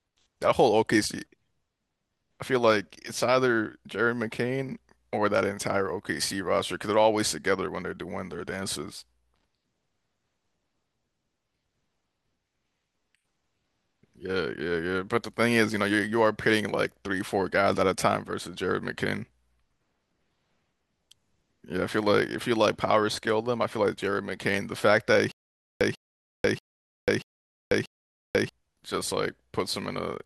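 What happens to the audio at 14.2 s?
Nothing goes wrong at 14.2 s; the speech there plays through intact, with no dropout, click or distortion.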